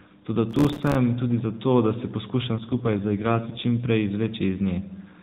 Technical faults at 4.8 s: none

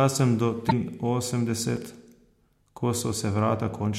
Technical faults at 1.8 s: block of digital silence

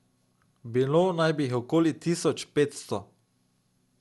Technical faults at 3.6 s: generation loss

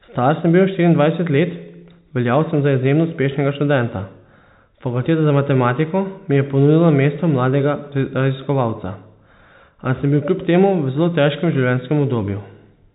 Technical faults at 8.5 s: none

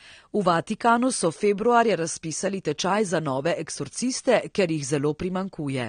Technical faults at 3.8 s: AAC compression

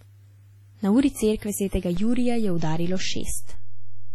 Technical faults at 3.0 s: WMA compression; DC step

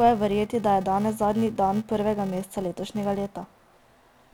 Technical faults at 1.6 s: filter restarted on every block

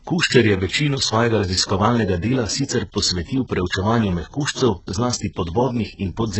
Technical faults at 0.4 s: HE-AAC compression

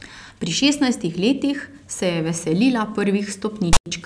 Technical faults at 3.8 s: file tags played as audio

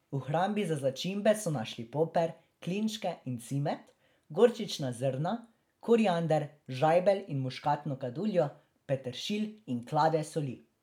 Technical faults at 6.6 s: none

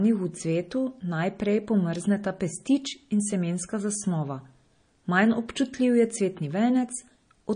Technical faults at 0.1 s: MP3 compression

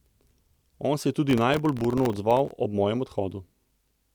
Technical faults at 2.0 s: processor overload crackle

